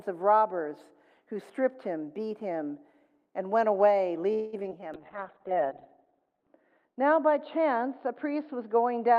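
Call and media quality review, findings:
Call audio freeze, 4.33 to 4.55 s: last sound stretched into a fading buzz for about 0.19 s, then resumes where it stopped with nothing lost. Likely packets delayed and the jitter buffer emptied. Unlike packet loss, inserts time rather than dropping audio.

Short concealed packet loss, 4.63 to 4.66 s and 4.70 to 4.73 s: brief smears where 20 ms and then 40 ms never reached the decoder, bridged by extrapolation. Second hole also pulls playout about 30 ms earlier. Too short for a freeze's fade.

Jitter buffer slow-down, 4.81 to 5.07 s: sound drawn out to about 87% speed at unchanged pitch, adding 40 ms as the receiver repeats pitch periods to rebuild its reserve. Pitch holds steady, unlike a clock or resampling fault.

Call bitrate drop, 4.95 s to the end: Opus falls from 32 to 6 kbps, bandwidth from 12 kHz to 4 kHz. Audio turns muffled and watery, worst for about 1.5 s. 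The encoder follows a falling bandwidth estimate. Band-limiting plus coarse coding, not a filter alone.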